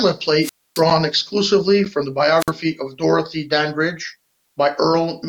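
A speech clip with two wireless microphone squelch dropouts, from 0.41 to 0.84 s just before "exclusively from the" (about 270 ms muted) and from 2.38 to 2.51 s just after it (about 54 ms). Hiss rises as the FM signal fades, then the receiver mutes. That hiss lead-in separates it from a digital dropout.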